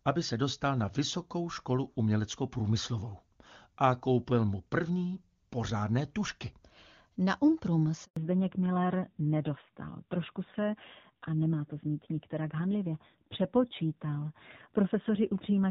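At 8.05 s a handover gap drops the audio to silence for 120 ms, as no speech frames arrived while the call switched networks. From 8.17 s onward, fallback to narrowband removes everything above 4 kHz, leaving the speech duller and rougher, which fits a low-rate AMR-NB mode after the clean, HD Voice wideband opening.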